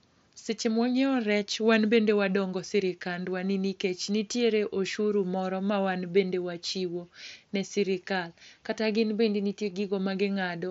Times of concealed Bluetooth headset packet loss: 4.33

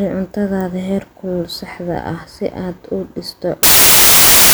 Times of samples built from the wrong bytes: 3.63-4.54

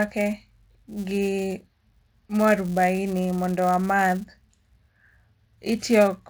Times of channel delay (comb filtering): none

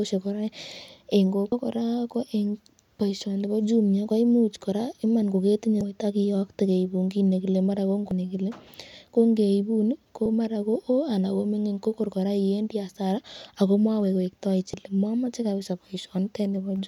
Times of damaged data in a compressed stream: 1.52-1.55, 5.81-5.84, 8.11-8.14, 10.25-10.29, 14.73-14.77

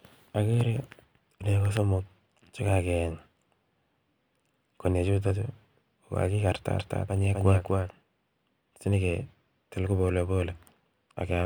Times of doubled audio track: 6.78-7.90

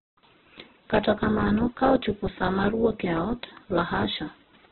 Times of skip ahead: none

